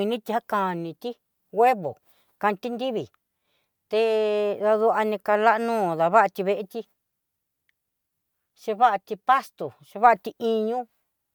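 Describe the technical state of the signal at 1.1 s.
At 1.1 s the speech signal is intact, with no dropout, clipping, glitch or other fault audible at that point.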